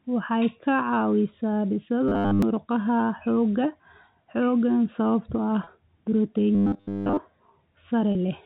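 Right after "ka caawisaa", from 2.08 to 2.42 s, the sound goes robotic with a rigid 100 Hz buzz, likely from repeated short buffers of about 10 ms; most of that stretch is repeats. It happens again from 6.55 to 7.18 s, this time entirely buzz. At 5.64–5.67 s and 8.12–8.15 s there's packet loss with pitch repetition: about 30 ms goes missing each time, which fits roughly three packets, and it's bridged by a brief held, buzzy tone. All of this sits on top of a G.711 telephone-band signal.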